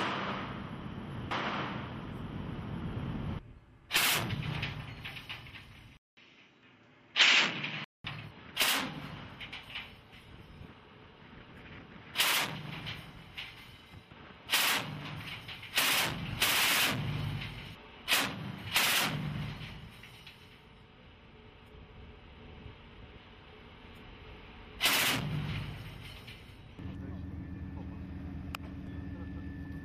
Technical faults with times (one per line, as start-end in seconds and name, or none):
5.97-8.04 input switched to a poorer device